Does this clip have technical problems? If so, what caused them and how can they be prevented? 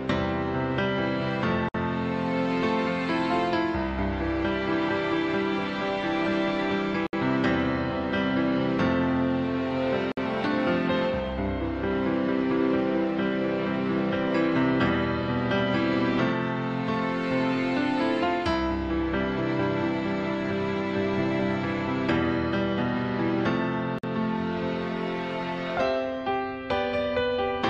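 Yes, there's a gap at a join of encoded pieces four times: 1.69 to 1.74 s, 7.07 to 7.13 s, 10.12 to 10.17 s, and 23.99 to 24.04 s, each 50 to 64 ms. Separately encoded chunks were butted together with their encoder start delay and last-frame padding left in, so the sound drops out with smeared edges and picks up where it stopped. Trim the encoder delay and padding (or encode the whole thing in one pass) before joining.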